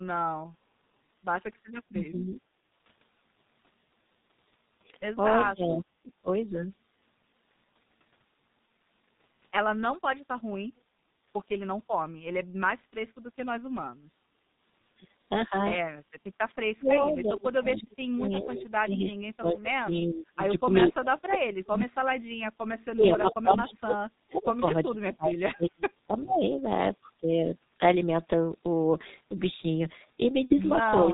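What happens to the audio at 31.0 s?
From 31.04 s to the clip's end at about 31.13 s, the sound dips by roughly 5 dB over about a tenth of a second. This is speech suppressed in double talk, likely an echo canceller ducking the talker while the far side spoke. The waveform envelope shrinks, and the spectrogram fades slightly.

Underneath, the whole clip carries heavy G.723.1 codec damage. The sound is muffled and hoarse, with smeared consonants, which points to a bitrate near 6 kbit/s and 30 ms frames. On a spectrogram, nothing appears above 4 kHz, and the harmonics look blurred and blocky.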